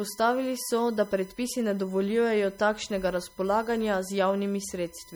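USB whine runs through the whole clip as a steady tone at 1 kHz, sitting roughly 30 dB below the speech. The USB bus draws current in regular 1 ms frames, and that pulsing leaks into the audio through a shared power or ground path. The 1 ms period becomes a fixed-pitch whine at 1 kHz.

Codec damage is plainly audible from start to finish. The sound is watery and swirly, with unsteady high detail and soft, smeared onsets, most likely from MP3 compression at a low bitrate, which fits something around 48 kbps. Short of bits, the encoder drops weaker frequency components and brings them back from frame to frame, which produces the swirl. Content reaches up to about 21.2 kHz, so the damage comes from that frame-to-frame dropout rather than from a low treble cut.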